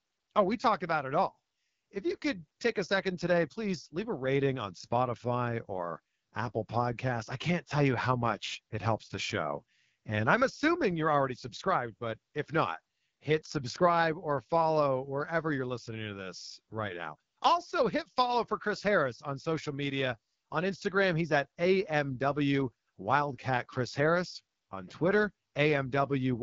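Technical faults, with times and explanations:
Throughout: AMR wideband (HD Voice) codec. The speech is rough and raspy, and there is nothing above 7.4 kHz. This codec models the vocal tract and drives it with sparse pulses to rebuild speech up to 6.4 kHz, then fills the top band with shaped noise instead of real detail. The plainly audible harshness points to one of its two lowest rates, which fits 8.85 kbit/s, where the excitation is too coarse to carry the speech cleanly.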